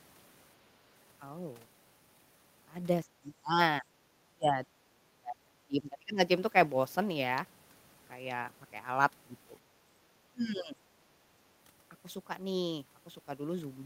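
Speech whose level drops sharply in four places: 3.05 to 3.59 s, a brief dip from 3.81 to 3.85 s, a long stretch from 4.04 to 6.18 s, and 10.07 to 10.79 s. The deepest cuts are roughly 25 to 30 dB, with the short dip only about 10 dB. This is likely speech suppressed in double talk, where the echo canceller, unable to separate the near talker from loudspeaker echo, attenuated both.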